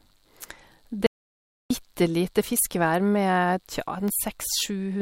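A speech recording in which the audio suddenly cuts to dead silence at 1.07 s and returns mid-flow at 1.70 s, leaving a gap of about 0.64 s with no room tone at all, so whatever was said in that stretch is simply missing. This is an audio dropout to silence, likely caused by the input being lost for a moment, through a disconnected device, a failed link or a brief mute, while the recorder kept writing silence. Later, from 4.08 to 4.10 s, a single sharp loud pop cuts across the speech, peaking a few decibels above the speech level while the talking carries on underneath without a break. The likely source is a sudden voltage step or spike, from a plug, a switch, a static discharge or a driver glitch, which the downstream circuitry turned into a short, percussive burst.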